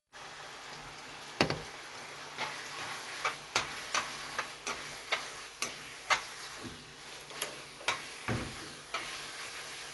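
From start to finish the sound is band-limited, with nothing above about 11.4 kHz, and the damage is plainly audible: the top end is dull and closed-in, and tonal parts carry a rough, fluttering haze. This points to Dolby Digital compression at a starved rate, likely around 64 kbps, where the encoder narrows the band and leaves many frequency lines without mantissa bits, so the decoder fills them with dither noise that flutters around the tones.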